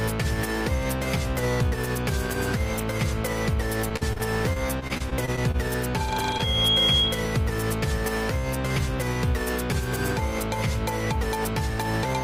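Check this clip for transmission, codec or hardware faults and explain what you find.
Three faults are present: a burst of repeated packet loss, a feedback squeal, and one short concealed dropout that falls inside the squeal.

From 3.89 to 5.56 s the sound turns choppy and robotic, with small pieces missing. This is repeated packet loss. Thirteen gaps are spread across this stretch, the longest 47 ms. The receiver bridged 284 ms in total by extending the last good audio, so about 17% of the span is synthetic, and another 160 ms simply drops out. The gaps come too close together for the concealment to recover between them, which produces the mechanical quality.

Between 6.10 and 7.32 s a single 3.3 kHz tone swells up over roughly half a second and settles about 5 dB above the program sound. This is loudspeaker feedback squeal. A microphone is picking up the loudspeaker it feeds, and at 3.3 kHz the loop gain goes above one, so that frequency keeps reinforcing itself until something limits it.

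At 6.38 to 6.41 s there is a brief smear or wobble. This is short concealed packet loss. About 10 ms was patched by continuing the preceding sound, and a further 20 ms is missing outright. The decoder then blends back into the real audio.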